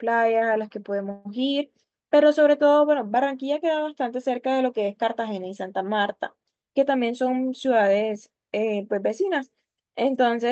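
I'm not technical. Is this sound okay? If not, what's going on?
No. A call audio freeze occurs at about 1.11 to 1.27 s. The speech stalls, and for about 135 ms the gap is filled with a fading buzz or hiss before the speech resumes where it left off. Nothing is lost, but the sound arrives later. The likely cause is that pieces of the call were held up on the way, so the receiving end ran out of sound to play and stretched the last bit until the rest arrived.

From about 6.96 to 8.49 s there is a jitter buffer speed-up. The speech runs about 9% faster at the same pitch and can sound rushed. The receiving end had stored more audio than it wanted, so to catch up it snipped out many tiny slices, roughly 150 ms in total. The call link keeps sound only up to about 8 kHz, so very high tones are missing.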